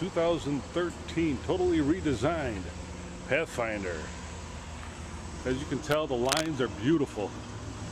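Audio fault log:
6.25–6.46 s, cable scratch noise: a worn cable, connector or control being shifted is the likely cause, with contact resistance fluctuating rapidly for about 0.21 s and injecting dense, irregular noise bursts roughly as loud as the sound itself, heard as a brief scratchy rustle over it.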